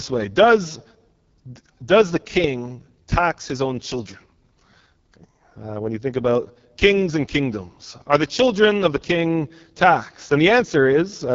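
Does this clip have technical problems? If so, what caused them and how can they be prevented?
Yes. Throughout the speech runs through the AMR wideband (HD Voice) codec, and the rough, raspy texture fits its lowest 6.6 kbit/s mode. The codec models the voice with a pulse-driven vocal tract filter up to 6.4 kHz and fills the band above with shaped noise, so at this rate detail is smeared. On a spectrogram, energy stops sharply near 7.4 kHz, the top band looks like shaped hiss, and harmonics appear blurred. To prevent this, run AMR-WB at 12.65 kbit/s or higher, or use a wider-band codec.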